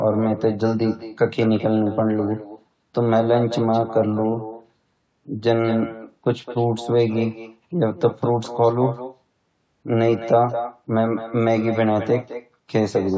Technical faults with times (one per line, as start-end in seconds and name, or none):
0.00-13.17 echo with no canceller